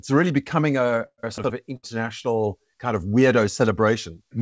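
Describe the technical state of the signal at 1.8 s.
At 1.8 s the speech stalls from a late packet, from 1.77 to 1.85 s. With the jitter buffer empty, the receiver stretched the last sound for 63 ms until the packet arrived, then resumed at the same point, losing nothing but leaving a held sound with a slight buzz or dip.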